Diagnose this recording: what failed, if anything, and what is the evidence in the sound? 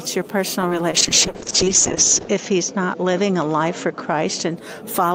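Short concealed packet loss, at the network stage. At 0.68 to 0.73 s and again at 0.91 to 0.95 s, the sound briefly smears. About 20 ms went missing each time. The receiver extended the preceding sound to bridge each gap, then faded back to real audio.

Call bitrate drop, at the codec stage. From 0.98 s to 4.63 s the sound turns rough and muffled. The encoder fell from 48 to 7 kbps, narrowing the audio band from 20 kHz to 8 kHz. It sat at its lowest for about 1.3 s.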